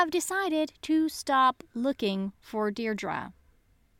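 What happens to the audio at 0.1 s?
At 0.1 s the speech plays through intact, with no dropout, click, distortion or other disturbance at that point.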